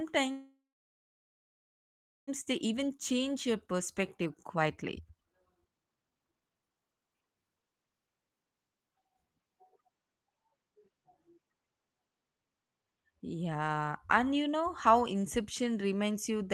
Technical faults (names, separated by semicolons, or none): call audio freeze; jitter buffer speed-up